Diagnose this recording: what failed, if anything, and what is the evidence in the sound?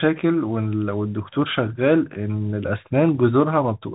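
Throughout, the speech is boxed in below 3.8 kHz, with s sounds turned scratchy and a granular hiss underneath. This is codec damage from a Bluetooth CVSD headset codec, which fits a 64 kbps one-bit delta stream whose adaptive step can't keep up with fast, loud high-frequency detail.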